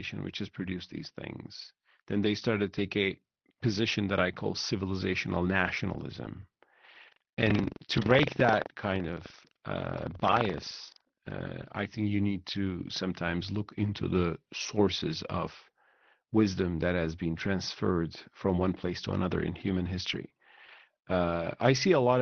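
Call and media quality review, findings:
Scattered short gaps, 5.64–6.55 s, right after "that I call civilizational": roughly five tiny holes, about 50 ms total, patched by continuing the last sound. Brief ticks and smears, over the 6 kHz Opus path.

Buffer tearing, 6.91–11.32 s, ending before "I think you need": steady robotic rattle at 23.4 Hz, which fits a 2048-sample buffer. Writer and reader crossing, splicing in about 7% audio roughly 100 ms old.

Lost packets rebuilt from error correction, 19.73–20.80 s, starting after "place to another in": eleven separate 10 ms frames played from low-bitrate Opus FEC copies. No gaps, just rougher, noisier patches.

Short concealed packet loss at 20.29–20.31 s and 20.66–20.69 s: 10 ms and 20 ms never arrived, so the decoder extrapolated the last sound and blended back. Quick smear/wobble inside the FEC stretch.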